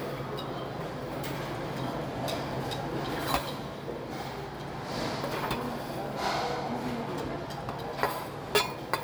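No technical faults can be heard anywhere in this recording of sounds, and the signal stays intact and continuous throughout.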